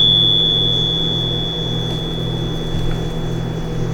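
No technical faults can be heard in this clip.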